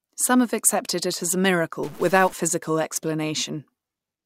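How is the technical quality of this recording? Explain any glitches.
The recording has one clear glitch in the speech. From 1.83 to 2.33 s, just after "accepted it as a", the sound turns harsh and buzzy for half a second, with a gritty noise floor under it. This is likely a stuck bit, one data line of the converter held at a fixed value. Roughly half the samples are pushed off by that bit's weight, an error step of about -35 dBFS, following the waveform's shape, so the distortion rides on the sound. Near silence, the bit flips as small values change sign, filling quiet moments with noise.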